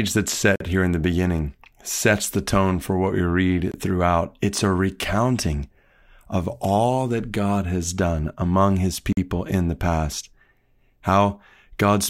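Speech, cut by three blocks of digital silence at 0.56–0.60 s, 3.72–3.74 s and 9.13–9.17 s (46, 23 and 46 ms). The output buffer likely wasn't filled in time, consistent with 2048- and 1024-sample buffers. The waveform shows flat zero-line gaps, and the spectrogram shows empty slots.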